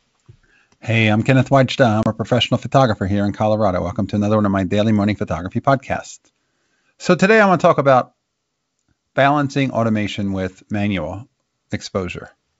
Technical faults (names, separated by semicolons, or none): packet loss on an ADPCM call